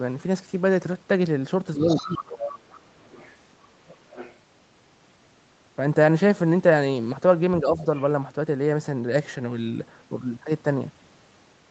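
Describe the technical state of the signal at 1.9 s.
At 1.9 s the talker's speech sits inside a dip from 1.76 to 2.25 s, about half a second, where the level falls by roughly 15 dB at its deepest. This is speech suppressed in double talk, most likely because the echo canceller could not separate the near talker from the loudspeaker echo while both sides spoke, so it pulled everything down.

Overlapping that same moment is the other side's voice leaking through, from 1.86 to 2.83 s, sitting about 10 dB below the talker. The far end plays from the device's loudspeaker and is picked up again by the microphone, with part of it likely surviving the echo canceller. Like the rest of the clip, this leaked voice is confined to the call band, with nothing above 8 kHz, and it outlasts the suppression dip by more than half a second.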